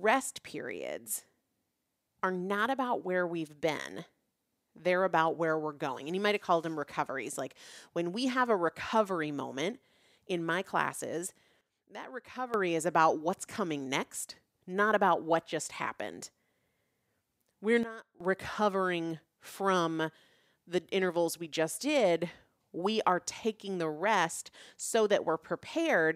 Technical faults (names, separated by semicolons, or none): sudden gain jump